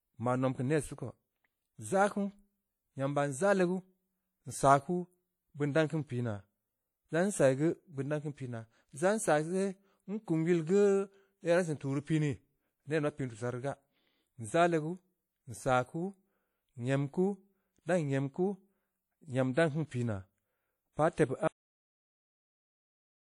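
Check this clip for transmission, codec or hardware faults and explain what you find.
Two faults are audible: codec damage across the whole speech clip, and an abrupt cut-off near the end.

Throughout, the speech carries plainly audible codec damage. Nothing sits above 17.7 kHz. The likely cause is WMA compression at a low bitrate, and the sound fits something near 48 kbps. This transform codec encodes long blocks of samples at once. Its quantisation noise spreads over tens of milliseconds around each sound. Weak spectral lines are zeroed. The result rings and sounds washy. A hiss swells and fades with the speech.

At 21.48 s the speech stops mid-sound. This is a cut-off end. The final buffers were never written or played out. So the sound does not decay naturally. It drops straight to silence. That silence runs from 21.48 s to the end of the clip at 23.28 s. Nothing further is heard in that stretch.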